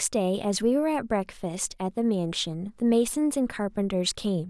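Nothing goes wrong anywhere in this bit of speech, so there's no technical fault to point to.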